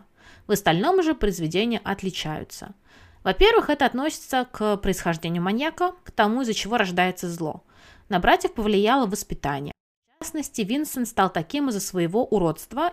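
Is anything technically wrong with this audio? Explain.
Yes. From 9.72 to 10.22 s there is a 24-bit alignment error (too quiet): 24-bit samples in the low bytes of 32-bit words are read as 32-bit, dropping the speech about 48 dB. The waveform collapses to a near-flat line and the spectrogram goes almost blank.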